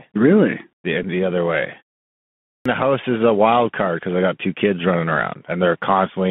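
Throughout the speech there is a narrow, boxy sound with a granular hiss underneath, scratchy s sounds, and roughness on loud, bright syllables. This is the Bluetooth CVSD headset codec. It sends one bit per sample at a 64 kHz rate, each bit only saying up or down, with an adapting step size. When the waveform moves faster than the step can follow, it distorts, and the steps themselves leave the hiss. The band here runs only from 150 Hz to 3.4 kHz, so nothing bright survives.

At 1.03 s there is a tiny buzzy tick, a flicker of rough tone lasting a few milliseconds. This is a Bluetooth headset packet repeated. Voice data between headset and phone went missing for about 7.5 ms, which fits two consecutive 3.75 ms packets. The chip filled the gap by decoding the previous packet's bits again. A run this short doesn't build into a steady buzz, only a brief blip.

At 2.31 s speech resumes abruptly out of silence, as though its opening was chopped off. 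This is a clipped start after a pause. After a pause of about 0.57 s, during which the output falls silent as expected, the playback path needed time to wake or lock again. Roughly the first 345 ms, up to 2.66 s, were swallowed, so the speech begins partway through.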